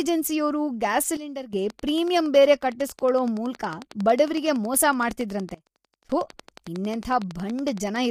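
Throughout, the speech carries plainly audible low-delay AAC compression damage, a rough, grainy texture that fits AAC-ELD at around 32 kbps, likely from a call path. From 1.17 to 1.53 s a sudden gain jump drops speech and background together by 12 dB, and again from 5.54 to 6.10 s by 23 dB, likely gain changes applied without a ramp. From 1.70 to 8.06 s a train of clicks ticks steadily at about 11 per second, roughly 70 in all and peaking about 5 dB above the speech, likely interference or a faulty connection.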